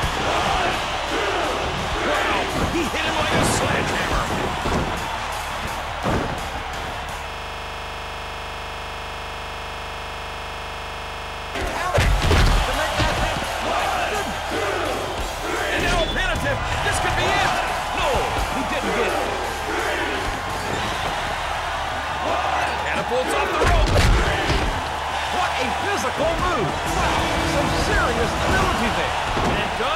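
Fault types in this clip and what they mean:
System hang loop: The computer stalled while the sound hardware kept replaying its buffer. From 7.3 to 11.55 s, one 40 ms slice of audio repeats exactly, 106 times. It comes out as a hard, rattling buzz at 25 Hz.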